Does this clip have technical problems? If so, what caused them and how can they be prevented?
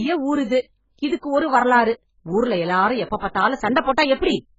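Yes. Heavy AAC compression was likely applied at a very low bitrate, consistent with AAC-LC at about 12 kbps, starving the coder of bits. Nothing remains above 7.6 kHz, so the speech sounds dull and smeared, with a warbling, fizzy texture on sustained sounds and sibilants. Encoding at a much higher bitrate would prevent this.

Pre-echo appears from 3.81 to 3.86 s. The transform coder spread quantisation noise across a whole block, so noise meant for a sharp attack filled the quiet stretch before it. About 50 ms of hiss precedes the attack, which sounds softened. A higher bitrate or an encoder with better block switching would prevent it.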